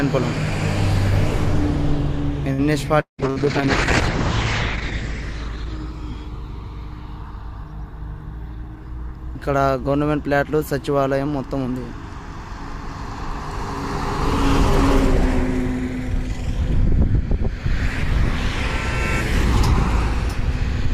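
At 2.53 s there is a short stall from a late packet. One packet came late and the jitter buffer emptied. The receiver held the last sound for about 59 ms, a slight buzzy stretch, then resumed with nothing lost.

From 3.01 to 3.21 s the audio breaks off. The last sound is drawn out and fades for about 176 ms, then goes quiet. About 180 ms never returns. This is likely a long network dropout.

From 3.22 s a call bitrate drop sets in and lasts until 8.04 s. The bandwidth estimate fell and the encoder coarsened sharply. The top end shrinks from 20 kHz to 8 kHz. It sounds muffled and watery, worst for about 1.8 s, which fits a fall from roughly 96 kbps to 9 kbps.

At 3.30 s, inside that degraded stretch, comes a burst of packet loss. About 60 ms went missing. The receiver extended the last sound for about 56 ms, fading it out, then jumped ahead past the gap at 3.39 s.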